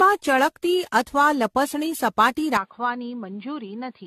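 From the start the speech has a swirly, hollow, smeared quality with softened consonant attacks, most likely generation loss from around ten successive AAC-LC passes at 64 kbit/s. On a spectrogram, the upper bands show scattered holes and blotchy, time-smeared energy, and onsets look blurred.

At 2.57 s the input switched to a poorer device, likely a different microphone. There is no gap, but the sound turns dull and a few decibels quieter. The spectrogram shows a hard ceiling at 4.8 kHz, and the waveform drops slightly, with a faint new noise floor.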